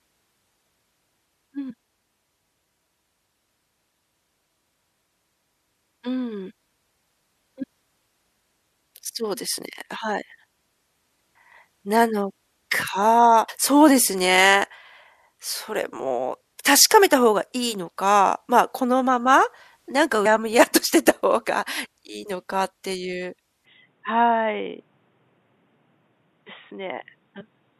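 Speech clip with two kinds of fault. Compressed frames skipped: at 13.48 s and again at 20.25 s the speech jumps forward, losing roughly 150 ms the first time and about 100 ms the second. Each gap spans several whole frames, which fits a codec with 24 ms frames, dropped because they were missing or rejected as damaged. From 23.65 s to the end the sound abruptly narrows. Nothing is present above 3.8 kHz, giving a dull, boxy tone, and a new noise floor appears about 45 dB below the speech. The loudness does not change and there is no gap at the transition. This is likely an input switched to a poorer device, such as a different microphone or a headset running its call profile.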